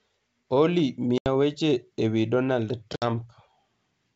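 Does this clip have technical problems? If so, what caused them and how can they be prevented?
Yes. Packet loss on an ADPCM call causes two hard-edged silent gaps, from 1.18 to 1.27 s (80 ms lost) and from 2.96 to 3.06 s (60 ms lost), each a few packets. After each gap the decoder's adaptive predictor and step size no longer match the sender's, so the speech returns with brief, slight distortion before resynchronising. The G.722 wideband coding, which sounds full-rate, adds faint or no damage of its own. Prevent this with a jitter buffer, forward error correction, and packet-loss concealment that resets decoder state cleanly.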